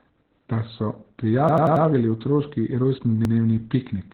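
Across the whole recording the speech carries Opus voice compression at about 8 kbps, running in its SILK linear-prediction mode at narrowband. The band is cut off near 4.3 kHz, so consonants lose their air and the speech sounds muffled and boxed in. With so few bits, the excitation signal driving the predictor is coded coarsely. This is heavy damage, heard as a hoarse, slightly robotic edge on every voiced stretch.

At 1.49 s a repeated buffer appears. A block of about 93 ms, which fits a 4096-sample buffer, plays four extra times, running to 1.86 s. New audio did not reach the output in time, so the device replayed the last block. The result is a rapid stutter with a hard seam at each repeat, and no audio is skipped afterward. The same fault returns at 3.25 s, with one extra play of a block of the same size ending at 3.34 s, giving a single short hiccup.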